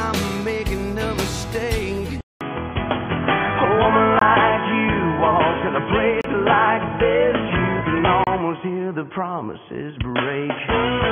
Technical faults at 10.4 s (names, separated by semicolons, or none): input switched to a poorer device